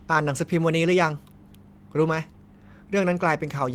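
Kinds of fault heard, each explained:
No technical faults can be heard in this recording.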